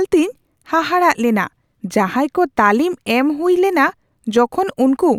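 No technical faults can be heard anywhere in the speech recording. There is nothing to place on a timeline.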